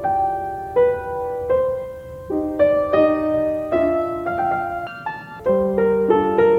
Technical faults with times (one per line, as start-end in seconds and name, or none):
4.87-5.40 audio read two samples at a time (double speed)